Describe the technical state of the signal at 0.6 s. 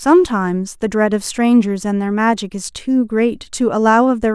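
At 0.6 s the speech signal is intact, with no audible technical fault at that moment.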